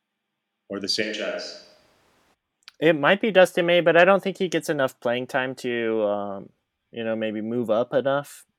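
Speech recording where, from 1.04 to 2.33 s, the close microphone likely dropped out and a distant microphone took over. The sound abruptly turns roomy and hollow, thinner in the bass, about 5 dB quieter, with background noise rising to roughly 30 dB below the speech.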